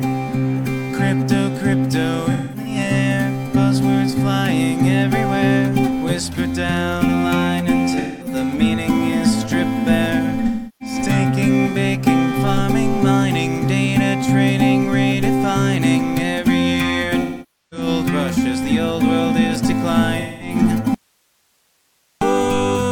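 At 2.31 to 2.76 s, 7.99 to 8.35 s, 10.46 to 10.95 s, 17.20 to 17.87 s and 20.19 to 20.56 s there is AAC frame loss with concealment. The decoder lost frames and filled the holes by reusing the last good spectrum, so each patch sounds smeared and noisy rather than silent. The lost spans are 0.26, 0.21, 0.34, 0.51 and 0.21 s. The first is scattered over 0.34 s, with its longest run around 0.2 s. On a spectrogram these show as blurred, flattened blocks with lost harmonic detail and hard frame-aligned edges. The 0.51 s patch at 17.2 s is the longest.

From 20.94 to 22.21 s the sound cuts out abruptly for 1.27 s, and only hiss remains, about 45 dB below the signal. This is most likely an audio dropout to a faint residue, where the source was lost but the path after the break stayed live. The waveform collapses to a thin noise band with sheer edges, not a taper. The spectrogram shows a uniform, faint broadband wash across the gap.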